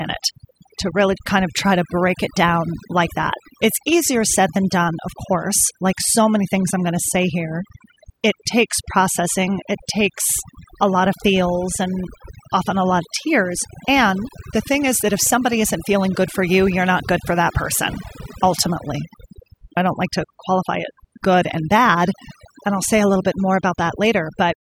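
Overdone noise removal runs throughout the speech. Heavy noise reduction pulls individual frequency bands near its noise estimate right down, taking quiet speech detail with them, so gaps fall to near silence with twinkling specks, up to the fade-out ending around 24.5 s.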